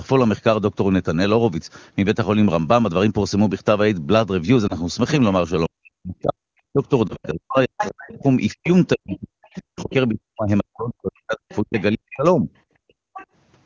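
Lost AMR speech frames at 4.67 to 4.75 s: a burst of radio errors corrupted one 20 ms frame so that it failed its checksum, and the AMR-WB decoder covered the gap by repeating the previous frame's pitch and vocal tract settings at reduced gain. The result is a brief dip, lasting well under a tenth of a second, before the sound returns slightly weak for an instant.

Speech suppressed in double talk, from 5.68 to 12.49 s: this is likely the echo canceller facing both parties talking at once. Unable to tell the near talker from loudspeaker echo, it pulled the microphone signal down, by roughly 40 dB at the deepest point, for around five seconds in total across this span. The talker's speech sinks while the other side is speaking.

Within that stretch, at 7.08 to 7.17 s, another lost AMR speech frame produces the same short dip as before.

Other side's voice leaking through at 7.79 to 8.15, 8.64 to 8.68, 9.55 to 9.93, 11.50 to 11.82 and 13.14 to 13.26 s: the far party, played on the talker's loudspeaker, likely reached the microphone and was not fully cancelled. 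That second voice surfaces in scraps. The first leak is strong, about 5 dB below the main speech. The later ones are fainter, about 15 to 25 dB down.

Background gated by the echo canceller at 12.77 to 13.14 s: with the loudspeaker active, the canceller clamped the microphone hard, cutting the room sound by about 37 dB. The ambience drops out for roughly 0.4 s, and it comes back just as the final scrap of leaked far-end voice appears.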